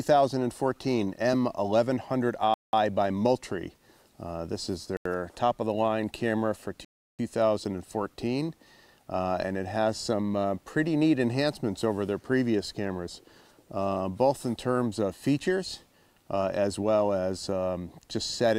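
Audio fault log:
2.54–2.73 s, 4.97–5.06 s, 6.85–7.19 s: block of digital silence. The sound drops out for 190, 85 and 341 ms with no fade, leaving short holes. The zeros stand in where the output wasn't filled in time or held invalid values. The last two gaps fit 4096- and 16384-sample buffers.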